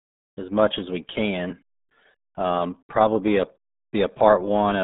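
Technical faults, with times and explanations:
Throughout, RealAudio 14.4 codec: the speech is squeezed into a narrow band of about 150 Hz to 3.7 kHz, with nothing above 3.8 kHz, so it sounds muffled, boxy and gargly. The heavy codec damage, with its smeared, watery texture, suggests a very low bitrate near 8 kbit/s. On a spectrogram the energy stops at a flat ceiling near 3.8 kHz with an empty band above, and the harmonics look blurred and blotchy rather than cleanly striped.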